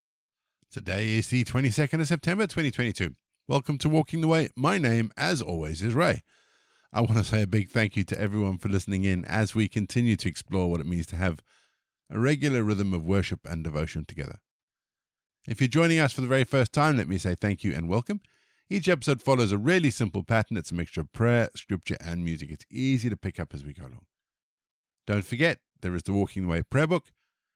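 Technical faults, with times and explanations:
No technical faults can be heard in this speech recording. There is nothing to list at any point in the clip.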